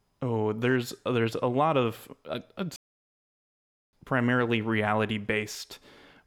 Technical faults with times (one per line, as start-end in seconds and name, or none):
2.76-3.93 playback stall